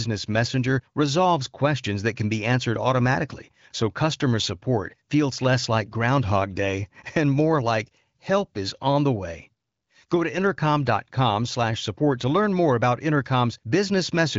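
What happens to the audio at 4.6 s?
Nothing goes wrong at 4.6 s; the speech continues intact there, with no dropout, click or distortion at that moment.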